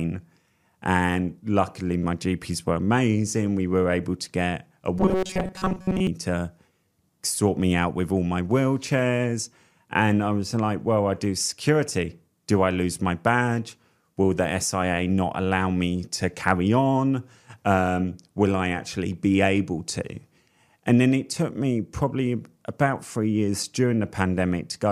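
At 4.98 s, right after "able to get a", the speech turns into a rigid, metallic buzz for about a second, until 6.07 s. That's robotic sound from repeated short buffers: the words are still roughly traceable, but a fixed pitch of 188 Hz sits on top of everything. It's likely new audio arriving too seldom, with the last chunk looped to fill the gap. A 188 Hz buzz fits a buffer around 5.3 ms long, and most of that stretch is repeats rather than real audio.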